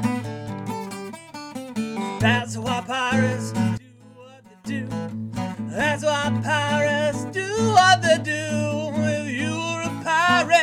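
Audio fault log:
3.78–4.65 s, one channel inverted: for just under a second the level falls by about 22 dB, then returns in full. The likely cause is one stereo channel flipping polarity, so the material shared by both sides cancels when summed to mono and only their difference survives. Unlike a dropout, the sound does not go silent; unlike a gain dip, what remains is only the faint mismatch between the channels rather than the whole sound turned down.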